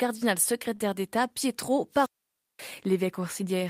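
At 0.75 to 0.80 s, short concealed packet loss: a few tens of milliseconds never arrived, and the decoder extended the preceding sound, leaving a brief smear. From 1.91 to 2.67 s, a wireless microphone squelch dropout: the FM signal faded, hiss rose, then the receiver muted for about 0.53 s before the speech returned.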